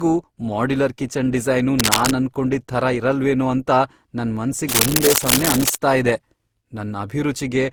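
The whole speech clip has a swirly, hollow, smeared quality with soft attacks, which sounds like generation loss, likely from re-encoding about seven times through something like 64 kbit/s Opus.

Right after "ಮಾಡ್ಯುಲರ್ ಕಿಚನ್ ಡಿಸೈನು", from 1.79 to 2.12 s, and again after "ಇರಲ್ವೇನೋ ಅಂತ ನನ್", from 4.69 to 5.76 s, you get cable scratch noise. It's rough, uneven scratching about as loud as the speech, likely a worn cable or connector being moved.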